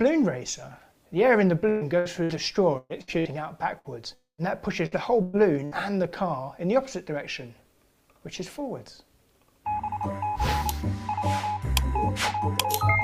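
From 1.69 to 3.87 s the sound turns choppy. Seven short holes fall close together, the longest about 122 ms, and each is filled by stretching the last fragment, so about a quarter of that span is patched rather than real. This is repeated packet loss (robotic sound): packets kept going missing or arriving late, and the concealment never got a clean run between gaps.

At 4.14 s the audio collapses into a held sound that fades, then goes silent for roughly 120 ms before returning at 4.41 s with about 240 ms of material gone. That shape points to a long network dropout as the likely cause. Nothing usable reached the receiver for that stretch, so it extended the last sound, let it decay, and then had only silence to offer until the stream resumed further on.

Three brief smeared holes follow, at 4.86 to 4.95 s, 5.22 to 5.36 s and 5.65 to 5.74 s. In each, the sound freezes into a short fading tail, and the audio picks up past a missing slice of about 60 ms, 120 ms and 60 ms respectively. 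Each is a burst of packet loss, a short run of lost or late packets covered by continuing and dimming the preceding sound.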